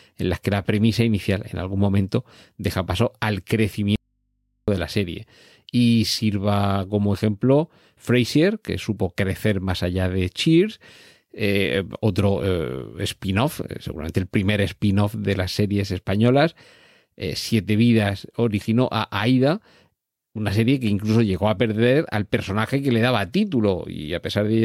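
At 3.96 s, after "momento deja paso al", the speech cuts out abruptly for 0.72 s. This is an audio dropout to a faint residue. Only mains hum remains, roughly 50 dB down. The signal likely dropped while the input stayed live. Speech returns at "de la serie".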